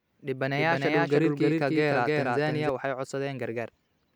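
A doubled audio track runs from 0.53 s to 2.69 s. A second copy of the speech sits on top of the first, trailing it by roughly a third of a second at about the same loudness. It has the full frequency range, with no decay or added room sound. Each syllable is followed by its own repeat, and the repeat switches on and off abruptly at those two times. The likely cause is the signal being picked up a second time through a slower path.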